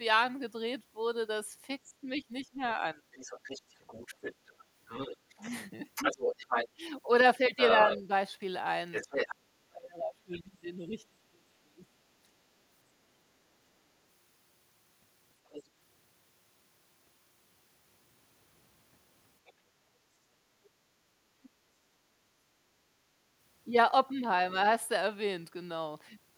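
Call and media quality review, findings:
Speech suppressed in double talk: speech level drops about 20 dB at 1.85–3.01 s and about 25 dB across 5.34–11.84 s. Likely the echo canceller attenuating near-end talk mistaken for loudspeaker echo.

Other side's voice leaking through: second voice audible 3.13–9.27 s at about −5 dB relative to speech; brief scraps at 15.50–15.63, 19.46–19.53, 21.43–21.49 s, about −15, −35, −30 dB. Likely residual echo the canceller missed.

Background gated by the echo canceller: room sound dips about 8 dB at 12.30–12.44 s and about 9 dB at 21.08–21.64 s, then recovers. Canceller clamps the microphone during loudspeaker playback.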